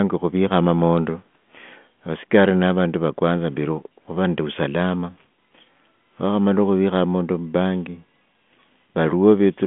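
Nothing stood out on listening to this speech recording, which carries a telephone band of roughly 150 Hz to 3.4 kHz through G.726 at 40 kbit/s.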